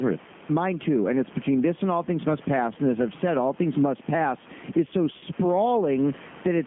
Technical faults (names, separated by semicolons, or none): gain pumping; G.729 codec; VoIP packet loss concealed by the speech codec